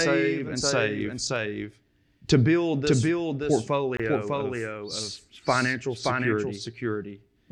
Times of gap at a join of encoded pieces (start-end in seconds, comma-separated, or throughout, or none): 3.97-4.00